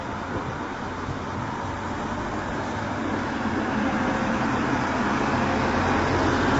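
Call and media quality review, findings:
Rough, grainy texture throughout, plainly audible. Noise fills gaps between harmonics. Nothing above 7.8 kHz. Likely low-delay AAC compression (AAC-ELD): short frames resolve harmonics poorly, and the damage fits a starved bitrate near 24 kbps.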